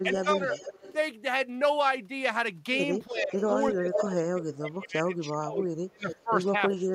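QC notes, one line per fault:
0.03–0.41 s, speech suppressed in double talk: a slight dip of about 5 dB, roughly 150 ms of it in all. Likely the canceller ducking the near talker while both sides overlap.
0.12–0.93 s, echo leak: a delayed copy trails the speech by 362 ms, about 10 dB under it. Likely loudspeaker pickup the canceller didn't fully remove.
3.06–3.37 s, speech suppressed in double talk: a deeper pull-down of about 15 dB across roughly 300 ms, likely the same overlap making the canceller clamp both.
3.32–4.15 s, echo leak: the returned copy arrives 370 ms late and sits about as loud as the speech itself. Likely unremoved speaker-to-mic echo.
3.72 s to the end, speech suppressed in double talk: the heaviest one, with the sound gouged by up to about 30 dB and roughly 2 s chopped or missing in pieces. Likely sustained double talk.
6.1–6.22 s, echo leak: a short scrap of echo 376 ms behind, about 10 dB down, likely residual pickup.
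6.69 s, echo leak: a brief blip 377 ms late, about 15 dB down, likely more of the same leakage.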